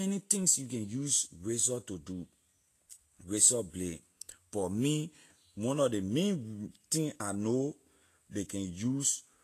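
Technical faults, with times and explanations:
throughout, Vorbis compression: nothing above 14.2 kHz remains and the speech sounds hissy and grainy, likely from coarse Vorbis coding at a bitrate near 34 kbps.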